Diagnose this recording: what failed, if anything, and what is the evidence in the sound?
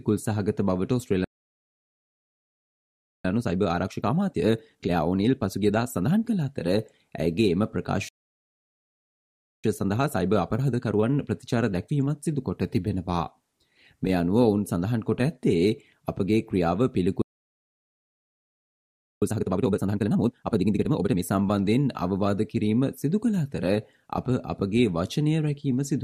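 The playback stage failed three times with a playback stall. The sound cuts out mid-flow from 1.24 to 3.25 s, 8.09 to 9.64 s and 17.22 to 19.22 s, giving silences of 2.0, 1.55 and 2.0 s. Gaps this long, rather than brief codec or network dropouts, point to a likely buffer underrun or blocked player thread.

After each stall the player performs time-compressed catch-up to drain its backlog. The sound runs 1.25 times fast from 3.25 to 6.25 s, 1.1 times from 9.64 to 12.64 s, and twice normal speed from 19.22 to 21.22 s. Pitch stays normal, unlike a sample-rate mismatch, which would raise the pitch.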